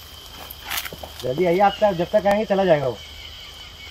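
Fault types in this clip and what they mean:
overlapping chunks: The audio was handled in half-second blocks, and each block begins about 23 ms before the previous one ended, so that sliver plays twice at every join. It is heard as a brief stutter recurring every 0.52 s, at 0.22–0.25, 0.75–0.77, 1.27–1.29, 1.79–1.81, 2.31–2.34, 2.84–2.86 and 3.36–3.38 s. Unlike dropouts or gaps, nothing goes missing. The tell is a doubled fragment at perfectly steady spacing.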